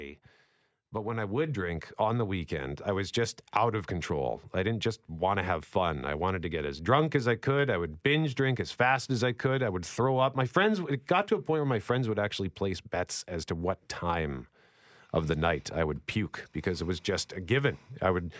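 From 0.94 s to 4.19 s the whole sound swells upward, voice and background noise together, ending just before "I didn't just want". The rise is slow and smooth, about 6 dB over roughly three seconds, with no jump. This is automatic gain rising: the gain control judged the input too quiet and raised its amplification step by step. Because gain acts on everything it receives, the background noise climbs along with the speech.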